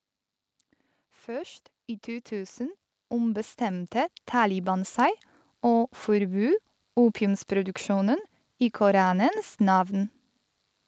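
From 1.25 to 5.02 s, automatic gain rising lifts the level by about 12 dB; unlike a speaker moving closer, the background noise swells along with the speech.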